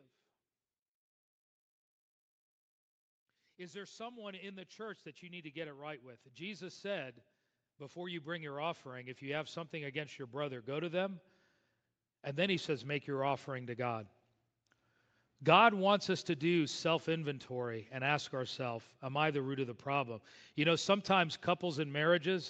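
From 3.25 to 7.21 s, automatic gain rising lifts the level by about 9 dB. It repeats from 7.77 to 11.26 s, adding about 8 dB. Speech and background swell together.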